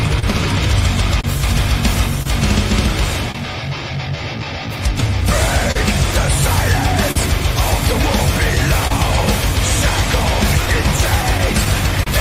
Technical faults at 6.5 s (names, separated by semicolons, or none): clock drift between sender and receiver